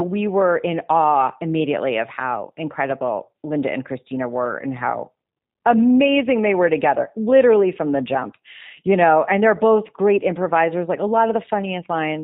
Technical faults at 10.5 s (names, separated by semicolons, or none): G.729 codec